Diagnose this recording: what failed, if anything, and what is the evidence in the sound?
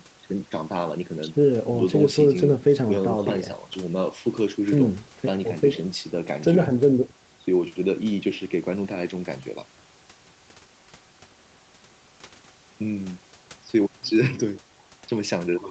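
Nothing in the signal chain failed in this recording of speech. The call path audibly limits the sound to nothing above 8 kHz, and faint room noise sits about 33 dB below the speech.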